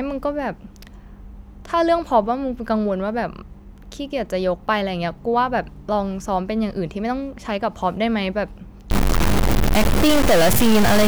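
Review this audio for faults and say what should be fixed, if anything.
Stuck bit from 8.91 s to the end: a harsh, buzzy distortion takes over the speech, and pauses fill with loud noise. This is likely a single data bit held at one value, knocking about half the samples off by a large step near -10 dBFS. Prevent it by checking converter wiring and running a bit-pattern test on the interface before recording.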